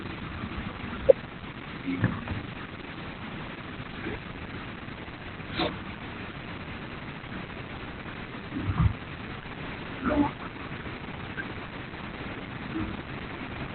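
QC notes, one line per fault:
Throughout: Opus voice compression. The speech is band-limited with nothing above 4.3 kHz, which points to the narrowband SILK linear-prediction mode at a very low rate, around 8 kbps. Coding damage is heavy. With the band cut and only a coarse excitation signal to rebuild the voice, consonants lose their hiss and the tone turns muffled, hoarse and faintly robotic. It is coded in 20 ms frames.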